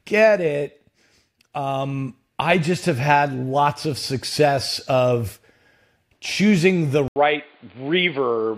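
After "choosing the", an 80 ms waveform gap at 7.08 s, then boxy sound with a 4.7 kHz spectrogram ceiling: likely input switched to a poorer device.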